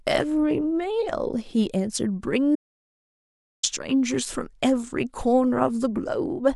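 At 2.55 s the speech cuts off abruptly, and it resumes just as suddenly at 3.63 s. This is an audio dropout to silence lasting about 1.08 s. The gap is silent, with no room tone or background hiss underneath. The likely cause is a brief loss of the input signal, such as a disconnected device, a failed link or a stray mute, while recording continued writing silence. Whatever was spoken during that second is gone.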